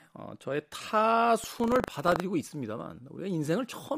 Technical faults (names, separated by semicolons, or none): buffer tearing